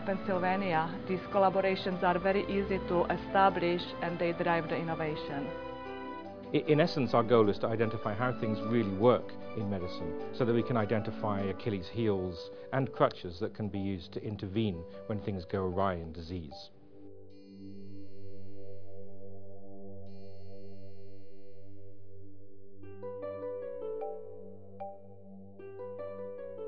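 The recording carries no technical faults in the signal path at any point.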